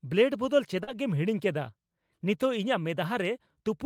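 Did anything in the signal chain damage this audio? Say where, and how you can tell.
Yes. From 0.83 to 0.89 s there is a brief smear where about 40 ms of audio is stretched out rather than heard. This is short concealed packet loss on the network path: the packets arrived too late, so the receiver extended the preceding sound to fill the gap and then blended back into the real signal.

Overlapping that, from 0.87 to 0.97 s, about 60 ms sounds rougher and noisier but has no gap. This is a lost packet rebuilt from error correction, consistent with three 20 ms frames restored from the low-bitrate Opus copies carried in the following packets.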